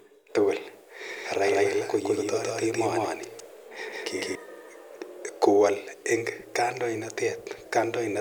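From 1.09 to 4.35 s the speech carries a doubled audio track: a second, equally loud copy trails by roughly 150 ms, likely from a slower duplicate capture path, and cuts in and out abruptly.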